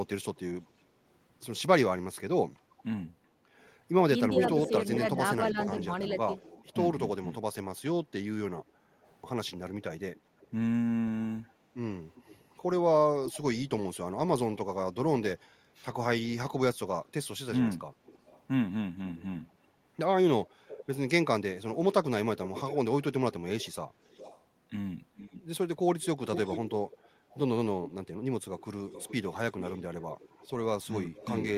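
A faint delayed copy of the speech trails the talker from 0.08 to 0.41 s, about 385 ms behind and very quiet, roughly 30 dB down. The same echo leak returns from 2.77 to 6.65 s at about 390 ms, now strong, only about 5 dB below the speech. It is heard again from 9.03 to 13.39 s at about 397 ms and roughly 20 dB down, and from 18.06 s to the end at about 413 ms and roughly 15 dB down. This is likely a far-end loudspeaker whose echo canceller let part of what its microphone picked up return down the line.

Between 4.36 and 6.33 s, while that strong echo overlaps, the talker's speech dips in patches totalling about a second, by up to roughly 5 dB. This is speech suppressed in double talk, likely the canceller turning down both the echo and the talker once it could not tell them apart.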